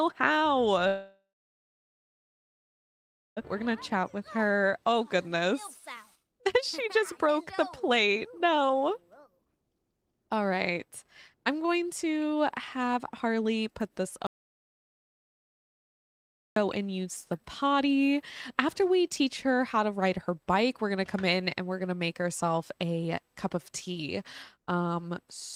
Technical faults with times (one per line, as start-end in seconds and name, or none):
0.87-3.39 call audio freeze
3.45 skip ahead
3.61-6.43 jitter buffer speed-up
6.86-10.13 jitter buffer speed-up
14.27-16.56 audio dropout to silence